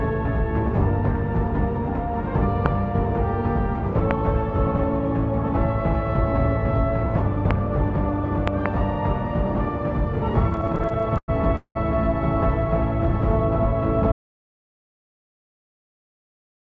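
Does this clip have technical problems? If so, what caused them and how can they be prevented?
Yes. A sudden voltage step, likely from a plug, a switch, static or a driver glitch, was added to the signal, producing a loud pop about 20 dB above the sound at 2.66 s, 4.11 s and 7.51 s, and a double pop from 8.48 to 8.68 s, with the sound continuing underneath. Secure connectors, ground the equipment, avoid switching devices mid-recording and keep audio drivers current.

Between 10.50 and 11.77 s, packets kept arriving late, so the jitter buffer ran empty 19 times and the receiver stretched the last sound to fill about 0.47 s, 37% of that span. The longest wait was 192 ms. Nothing is lost, but the repeated stalls make the audio stutter and drag. A steadier network connection and a larger adaptive jitter buffer would prevent these underruns.

From 14.12 s to the end, an audio dropout to silence occurs. 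The input was likely lost through a disconnected device, a failed link or an accidental mute, and silence was written in its place, so the sound stops dead with no room tone. Anything played or said during that stretch is gone. Monitoring input levels and securing device connections would catch and prevent this.

The G.722 call path at 64 kbps carries nothing above 8 kHz.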